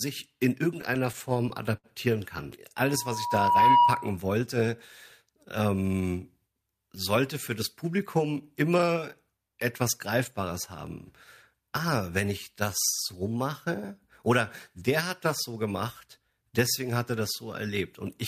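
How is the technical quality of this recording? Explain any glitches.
The recording has two clear glitches early on: a stretch of stuttering, then a feedback squeal.

From 0.81 to 1.86 s, the speech suffers repeated stalls (stutter). There are nine short breaks, the longest lasting 67 ms. Together they fill about 145 ms, roughly 14% of that span. Packets were arriving late, so the jitter buffer kept running dry. Each time, the receiver stretched the last sound until fresh data came. Nothing is lost, but the speech drags and hiccups.

From 2.80 to 4.17 s, there is loudspeaker feedback squeal. A microphone was hearing the loudspeaker it fed. At 963 Hz the loop gained more than it lost, so that tone grew by itself. It swells over about a second into a steady whistle. It peaks about 10 dB above the speech before it stops.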